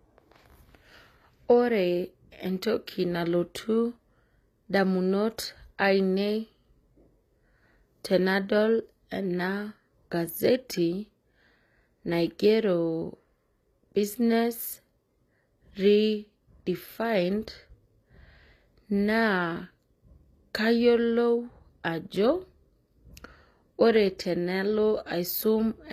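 Speech throughout carries plainly audible HE-AAC compression damage: s sounds turn gritty and metallic, likely from treble rebuilt by copying lower bands upward at a low bitrate around 24 kbps. A spectrogram shows a hard ceiling at 14.9 kHz, with repeated, smeared-looking patterns above the crossover.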